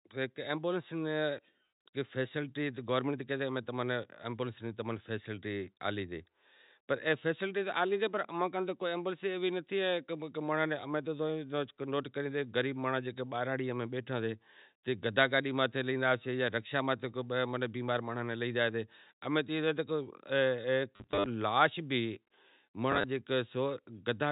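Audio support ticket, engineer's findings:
Packet loss with last packet repeated, 20.96–21.26 s: scattered robotic stutter, 190 ms lost over 300 ms, runs to 50 ms. Again 22.92–23.04 s: 60 ms lost, runs to 30 ms. Receiver replays previous packet, not pitch-aligned. Buzz fits 10 ms packets.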